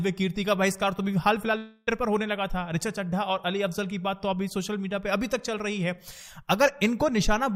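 From 1.57 to 1.90 s, a long network dropout likely stopped audio arriving. The lost 0.3 s is filled by a fading buzz or hiss rather than silence before the sound resumes.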